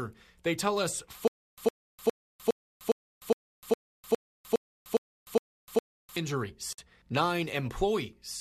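From 1.28 s to 6.17 s the speech falls into a stutter with silent gaps. A fragment of about 109 ms plays, then about 301 ms of digital silence follows, and the pattern repeats every 410 ms, twelve times in all. The likely cause is a stalled player or stream replaying its last buffered fragment at each retry. On a waveform this shows as identical short blocks separated by flat near-silent lines. A spectrogram shows matching vertical slices with black columns between them. The speech that should have filled that span is gone.

At 6.73 s a gap at a join of encoded pieces cuts the continuous speech for about 53 ms, ending at 6.78 s. Separately encoded segments were butted together with the encoder's start delay and end-of-frame padding left in place. The speech then resumes where it broke off. The waveform drops to near silence and comes back, with edges blurred by the codec. On a spectrogram it is a thin dark vertical stripe across all frequencies.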